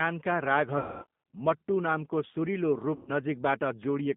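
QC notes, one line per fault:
throughout: G.729 codec, with speech coded at 8 kbit/s from a filter, pitch predictor and sparse pulses, so it sounds rough and synthetic within a 150 Hz to 3.6 kHz band.
0.78–1.06 s and 2.95–3.11 s: VoIP packet loss concealed by the speech codec. The decoder extrapolated its last pitch and filter across gaps of roughly 240 ms and 120 ms, giving a fading smear of buzzy tone or coloured noise that ends just before "मट्टू नामको सुरिलो" and begins just after it.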